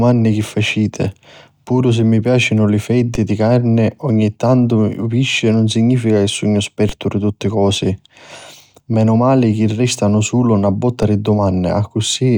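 At 3.15, 6.89 and 11.03 s the speech gets a DC step: the zero line jumps by about -11 dBFS (about -13 dBFS the last time), giving a low thump, and the offset then decays as a 20 Hz high-pass drains it away.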